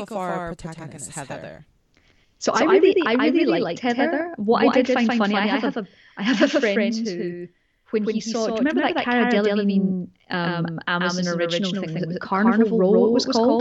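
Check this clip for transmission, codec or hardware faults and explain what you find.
A doubled audio track runs through the whole speech clip. A second full-band copy trails the first by around 150 ms, at about the same level. It likely comes from the same audio captured twice through a slower path. Each syllable repeats as a dry, flat echo with no room tail.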